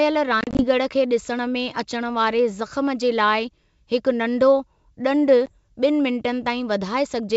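Packet loss on an ADPCM call hits twice. From 0.41 to 0.65 s, around ten packets drop out, about 100 ms of speech lost in gaps scattered across 180 ms, none longer than 30 ms. Each hole is hard-edged silence, and the speech comes back slightly distorted because the decoder's predictor and step size no longer match the sender's. At 5.46 s a single 10 ms packet goes, with a brief recovery until about 5.52 s.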